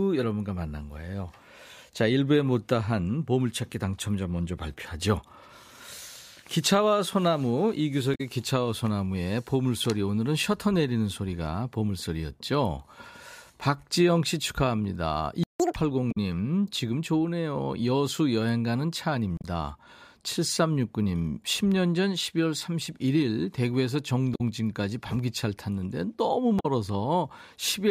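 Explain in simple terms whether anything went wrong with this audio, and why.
Several short chirps, squawks, clicks or brief gaps break into the speech, at 8.14, 16.11, 19.35, 24.34 and 26.59 seconds, each lasting under a tenth of a second. This is damaged data in a compressed stream. Some of the compressed audio was corrupted, so the decoder briefly turned garbage into sound, lost its place, and jumped ahead to the next piece it could read.

At 15.44 seconds the speech suddenly drops out to silence for about 0.16 seconds before carrying on. This is a playback stall. The likely cause is that the player ran out of audio data, or was held up, and had nothing to send out until it recovered.

Right after that gap, from 15.6 to 15.76 seconds, the speech rushes along at twice normal speed and jumps up in pitch by close to an octave, giving a brief chipmunk-like sound before settling back. This is catch-up at higher speed. 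Having fallen behind during the stall, the player played the waiting audio faster to win back the lost time, and raising the speed raised the pitch along with it.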